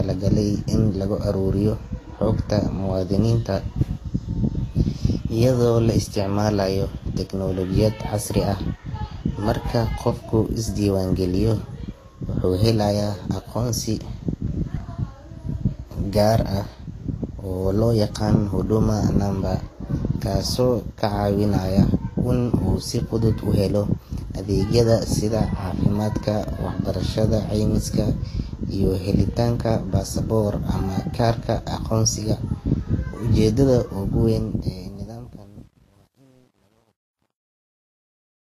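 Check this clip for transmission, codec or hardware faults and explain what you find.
Two faults are present: a layered low-bitrate codec sound across the whole speech clip that likely comes from transcoding, and a fade-out whose quiet end turns gritty.

Transcoding between lossy codecs runs throughout. Nothing is present above 14.2 kHz, and the speech carries two overlapping families of artefact: smeared, swirly high-frequency texture together with a separate grainy, warbling coding noise. The likely cause is one low-bitrate codec feeding another, consistent with an HE-AAC stage at around 32 kbit/s followed by Vorbis at a similar rate. Each pass re-encodes the earlier damage and adds its own, while the lowest cut-off survives. A single low-bitrate encode would show one consistent artefact character, not two distinct ones mixed together.

Truncation distortion on a fade runs from 34.23 s to 38.58 s. 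The fade-out itself starts around 34 s and glides down to 38.6 s. As the level drops, though, the sound turns gritty, and from 35.1 s to the end the grit is at its worst. This fits a fade computed at about 10-bit resolution without dither, so the waveform collapses into a few coarse square steps. Dithered noise would stay a smooth hiss, not this gritty decay.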